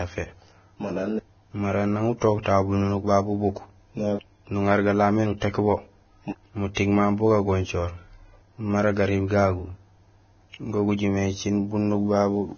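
Vorbis compression, throughout the speech, likely causes the hissy, grainy texture. The encoder drops everything above 6.5 kHz and quantises the remaining treble so coarsely that fine detail turns to noise, which fits a heavily squeezed stream of roughly 18 kbps.

Pre-echo, from 2.43 to 2.46 s and from 6.75 to 6.77 s, puts a brief hiss of about 29 ms and 25 ms ahead of sharp attacks. The codec spreads quantisation noise across each transform block, so noise sized for the loud onset leaks backward and softens it.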